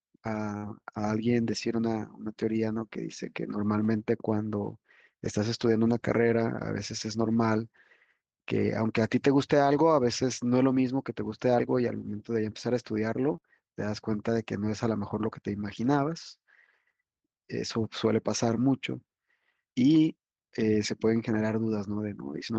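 At 0.57 to 0.64 s a burst of packet loss is audible: about 48 ms of the last sound is stretched and faded, then playback resumes with roughly 40 ms missing. The final stretch, 0.62 to 0.64 s, is a lost packet rebuilt from error correction. The same repair recurs at 5.88 to 5.94 s (40 ms), 13.32 to 13.34 s (20 ms) and 18.48 to 18.58 s (60 ms in all). Each time a low-bitrate backup copy stands in, so there is no gap, only a briefly rougher, noisier texture through the Opus call path, whose band stops near 12 kHz. Right after, at 13.36 to 13.40 s and 13.40 to 13.44 s, come two short concealed packet losses. The receiver extrapolates the preceding sound for about 14 ms and 23 ms, and each drops about 20 ms of real audio, heard as a quick smear or wobble.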